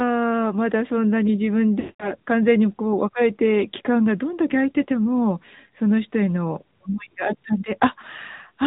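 The whole clip runs through the AMR narrowband mobile codec. Everything above 4 kHz is gone, and the speech sounds plainly buzzy and synthetic, which fits a mid-rate mode around 10.2 kbps. The pulse excitation just doesn't get enough bits per frame at that rate.

From 1.80 to 2.12 s there's a run of lost AMR speech frames, about 200 ms' worth. The decoder keeps replaying the last good pitch and vocal-tract settings at falling gain, so the speech smears out and fades to silence before coming back rough.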